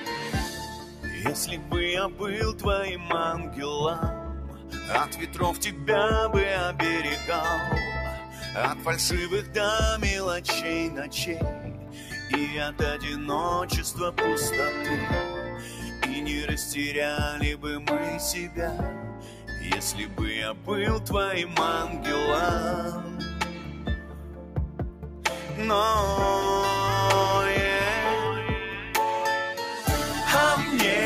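A noise suppressor built for speech runs over the whole clip, mistaking steady and decaying sound for noise, so the level pumps and tails thin, with swings of around 10 dB.

The same suppressor cuts sound harder at 0.0–5.85 s (down about 8 dB), 8.19–9.55 s (about 6 dB), 11.54–12.8 s (about 7 dB), 15.49–16.02 s (about 6 dB), 17.55–20.69 s (about 7 dB) and 23.02–25.52 s (about 8 dB). In each stretch, held portions sink and decays shorten while sudden onsets mostly pass.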